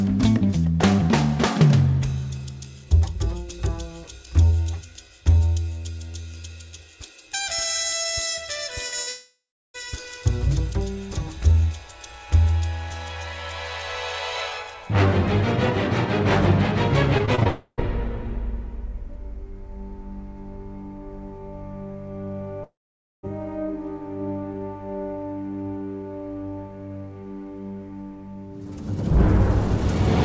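A brief smear at 8.88 to 8.94 s is a short concealed packet loss: about 40 ms of audio never arrived in time, and the receiver stretched the preceding sound across the hole before blending back into the real signal.

At 9.02 to 9.09 s a held buzz or fading hiss is a burst of packet loss. Roughly 40 ms went missing in a row, so the receiver continued the last sound while turning it down, and the audio resumes slightly further on.

That burst runs straight into a long network dropout from 9.09 to 9.76 s. The continued sound fades away and leaves about 0.38 s of silence before the audio returns, with roughly 0.66 s gone. The likely cause is that no packets arrived for that whole stretch.

From 17.18 to 17.47 s the sound turns choppy, which is repeated packet loss (robotic sound). Five separate gaps, the longest 24 ms, were each patched by continuing the previous sound, so about a third of this span is filled in rather than real.

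Another long network dropout follows at once, from 17.47 to 17.80 s. Here the fill carries on longer and only about 70 ms of true silence is heard, with about 0.3 s lost. The third, from 22.64 to 23.25 s, fades quickly into about 0.52 s of silence, with about 0.6 s of audio missing.

Throughout the clip there is no content above 8 kHz, which fits a wideband call codec such as G.722.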